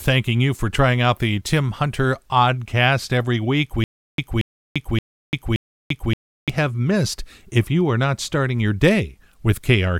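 From 3.84 s to 6.50 s the speech breaks into stutter with silent gaps: a 230 ms fragment repeats four times, separated by 343 ms of digital silence, likely from a stalled stream.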